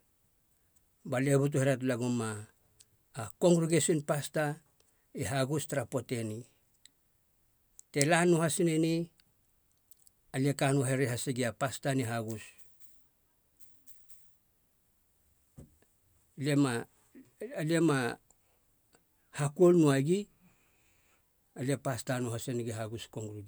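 From 0.62 s to 23.41 s, a click recurs every 1.75 s, about fifteen in all, likely clock drift buffer slips: a mismatch of around 100 ppm drops or repeats a few samples. Each shows as a thin vertical line on a spectrogram and a step in the waveform.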